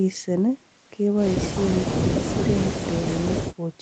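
No technical faults can be heard in this speech.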